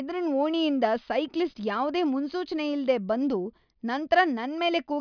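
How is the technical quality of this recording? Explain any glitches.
No glitches to explain here, as nothing in the recording jumps out as a technical fault anywhere along the way.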